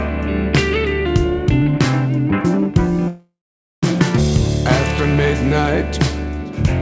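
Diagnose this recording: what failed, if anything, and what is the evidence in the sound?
A call audio freeze runs from 3.08 to 3.84 s. The last sound is stretched into a fading buzz that settles into roughly 0.49 s of silence, then the audio resumes where it stopped. Packets were likely stalled in the network, draining the jitter buffer and inserting about 0.75 s of delay.

A skip ahead follows at 4.16 s. Playback jumps forward across a join of only about 8 ms, and roughly 0.4 s of audio is gone. This fits the jitter buffer discarding backlog queued during the freeze, in a call path whose codec passes nothing above 8 kHz.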